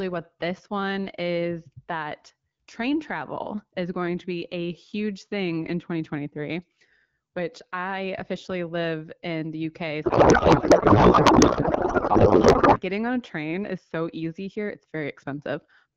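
From 10.03 to 12.81 s, just before "getting on a train", a codec payload misread replaces the speech with garbled noise and warble. The AMR frames' packing is misinterpreted, so fields are read from the wrong places. Unlike dropouts or low-bitrate rasp, the garble persists unbroken.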